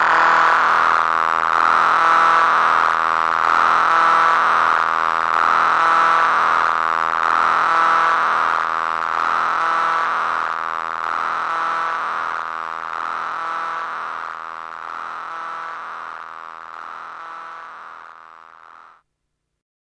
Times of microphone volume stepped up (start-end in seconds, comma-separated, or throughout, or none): none